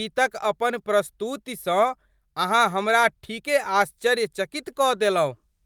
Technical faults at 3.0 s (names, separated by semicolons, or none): none